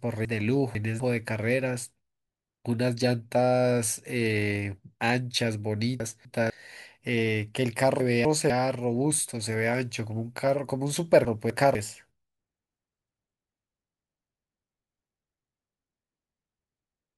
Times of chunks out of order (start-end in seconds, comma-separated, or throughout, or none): 0.25-1.00, 6.00-6.50, 8.00-8.50, 11.25-11.75